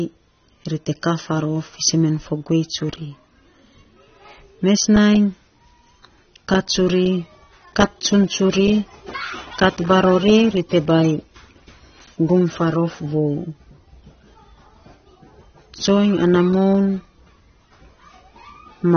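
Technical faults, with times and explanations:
Throughout, AAC compression: the speech sounds dull and smeared, with nothing above 6.3 kHz. The likely cause is AAC-LC coding at a bitrate near 24 kbps.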